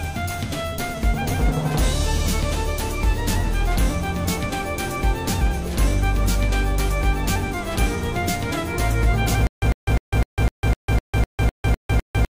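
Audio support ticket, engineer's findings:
Stutter with silent gaps, 9.47 s to end: same 101 ms burst repeats every 253 ms, 152 ms digital silence between. Likely player stall replaying last buffer. Waveform shows identical blocks, flat gaps; audio lost.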